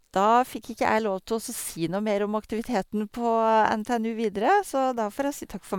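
Speech, with no technical faults to report.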